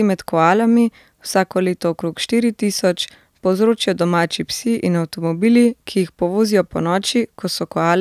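Speech recording with no audible technical faults.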